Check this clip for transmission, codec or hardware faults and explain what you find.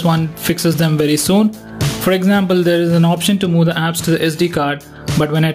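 Two faults are audible: gain pumping across the whole clip and sample clock jitter in its first part.

Gain pumping runs throughout. The level ducks under each loud sound, swinging around 20 dB, which points to a likely cause of input gain set far too high with a fast limiter clamping it. Unlike a slow automatic gain drift, the ducking tracks each loud sound closely.

Sample clock jitter runs from 0.00 to 3.38 s. An unstable converter clock, wandering by about 7 µs, shifts sample timing. The error scales with waveform slope, giving roughness around 25 dB below the signal that rises on loud, bright passages and disappears in silence. Steady background hiss would stay put.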